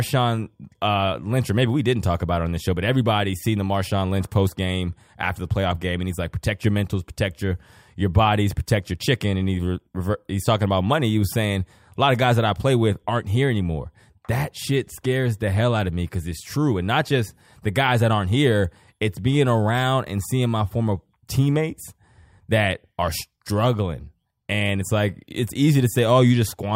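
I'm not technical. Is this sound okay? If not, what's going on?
No. Sample clock jitter runs throughout the recording, from start to finish. The clock that times each sample in the recording device wobbles by a tiny amount, under a millionth of a second, so each sample is taken slightly too early or too late. Those timing slips become a faint hiss or roughness riding on the speech. It is strongest on loud and sharp, bright sounds and disappears in the pauses.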